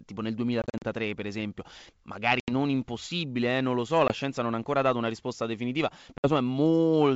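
Hard-edged silent holes cut through the speech, each followed by a brief, slightly distorted return that settles within tens of milliseconds: 0.62 to 0.85 s after "tipo nel", scattered gaps of up to 40 ms totalling 120 ms; 2.40 to 2.52 s before "impossibile eh non lo"; 4.1 s between "eh non lo so" and "scienza non ha ancora"; 6.18 to 6.30 s. This is packet loss on an ADPCM call. The missing packets were filled with silence, and the decoder's adaptive predictor and step size drifted from the sender's. In between, the G.722 wideband coding carries speech clearly to 7 kHz.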